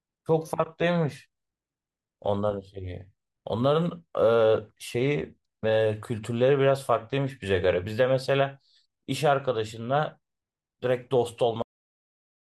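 At 11.62 s the speech hits a cut-off end. The final stretch of audio was never written or played out. The sound stops mid-utterance. It falls straight to digital silence with no decay. That silence holds for the last 0.9 s.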